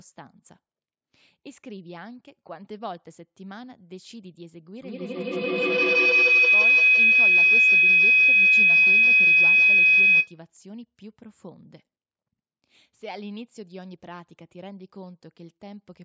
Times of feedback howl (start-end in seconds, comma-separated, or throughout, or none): 4.81-10.47